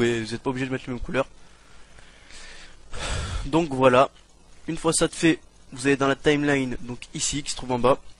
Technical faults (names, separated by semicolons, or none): none